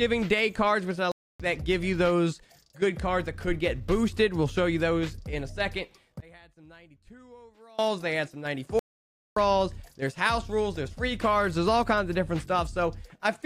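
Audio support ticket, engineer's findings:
Playback stall, 1.12–1.40 s (280 ms) and 8.79–9.36 s (about 570 ms). Output goes fully silent mid-flow. This points to the player's buffer or thread, likely starved of data or blocked.

One channel inverted, 6.20–7.79 s. Level drops about 28 dB on mono sum, and centred content nearly vanishes. Unlike a stall, the sound never fully stops: a faint inter-channel residue remains. Likely cause is reversed polarity on one stereo leg.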